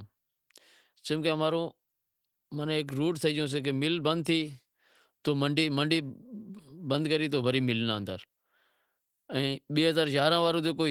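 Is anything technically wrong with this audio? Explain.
No, nothing is technically wrong: the speech carries the light texture of Opus voice compression in its hybrid mode, with the band extending to about 20.2 kHz, which fits a rate around 20 kbps.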